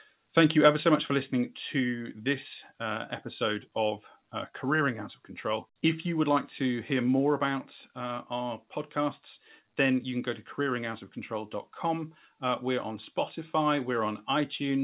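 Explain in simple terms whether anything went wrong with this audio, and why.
The speech suddenly gets a little quieter twice: at 1.8 s, between "so much for listening" and "this uh episode of", and again, more slightly, at 7.2 s, after "would like to hear" and before "about uh". This is a microphone volume stepped down, likely the call software turning the microphone input down. It differs from a gradual fade because each drop happens all at once, and the voice and background both stay at the lower level afterwards.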